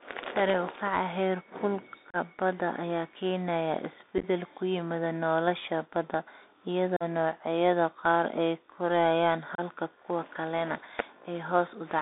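A speech recording heard entirely through a Bluetooth CVSD headset codec. The band stops at about 250 Hz and 3.7 kHz, and the codec damage is plainly audible. The one-bit delta coder, which points to a 64 kbps link, leaves a granular hiss under the speech, scratchy sibilants and distortion where loud high content outruns its adapting step. A narrowband telephone filter alone would sound clean and would not have that grainy, step-limited roughness. On top of this sits unconcealed Bluetooth headset packet loss, heard as short hard-edged holes where lost voice packets were replaced by silence or an idle pattern. The first is at 2.10–2.16 s, just before "badda ayaa keenaya", with about 34 ms missing. The second is at 4.18–4.24 s, between "badda ayaa keenaya" and "ku yimaada nolosha", where about 38 ms is lost in pieces over about 53 ms, the longest about 11 ms. The third is at 6.96–7.03 s, with about 41 ms missing. 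The fourth is at 9.55–9.60 s, between "noocyada qaar ay korayaan" and "kuwa kalena", with 30 ms missing. Each fits roughly ten lost packets, or about seven in the last. Unlike concealed loss, nothing fills the gaps, so their edges are abrupt and the speech resumes briefly quieter.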